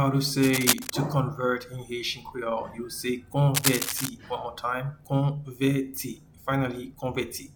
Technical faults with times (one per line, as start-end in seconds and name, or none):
0.42-0.91 cable scratch noise
3.54-4.09 cable scratch noise